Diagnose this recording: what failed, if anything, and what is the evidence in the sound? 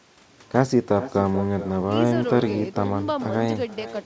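The failure is at the call-processing stage: an echo with no canceller runs through the whole speech clip. The far end's loudspeaker feeds its microphone and nothing subtracts it, so each phrase returns roughly four tenths of a second later at about 14 dB below the direct speech, and thinner. On the waveform every burst trails a smaller duplicate, and the spectrogram shows ghosted, time-shifted copies of each syllable under the 8 kHz ceiling of the G.722 wideband path.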